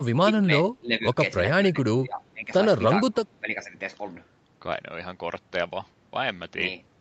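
Speech suppressed in double talk dips the speech seven times, at 0.00–0.05, 0.23–0.44, 0.80–1.16, 1.72–1.76, 1.94–2.52, 3.06–3.19 and 3.40–3.75 s, by roughly 5 to 20 dB at the deepest. The likely cause is an echo canceller that, with both sides talking, mistook this talker for loudspeaker echo and turned it down. The speech sounds choppy and ducked. On the waveform the envelope sags in patches, and the spectrogram shows brief faded bands across the voice.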